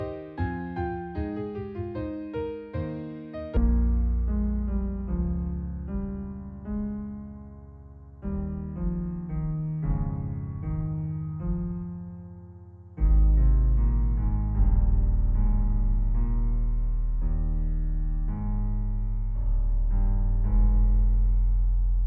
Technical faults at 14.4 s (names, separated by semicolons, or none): wrong sample rate